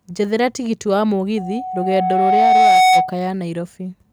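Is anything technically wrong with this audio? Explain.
Yes. A loudspeaker feedback squeal runs from 1.37 to 3.14 s. A microphone is picking up the loudspeaker it feeds, and at 744 Hz the loop gain tips above one, so that frequency feeds on itself. A pure tone emerges over the speech and swells for about a second and a half, ending roughly 10 dB louder than the speech, a sustained whistle-like howl.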